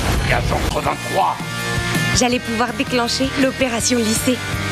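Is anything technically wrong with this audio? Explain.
Yes, there's a CD skip at about 0.69 s. The laser jumped, from a knock or a flaw, onto another turn of the disc's spiral, so playback mutes for roughly fifteen milliseconds, then picks up from a different spot, so the audio jumps abruptly.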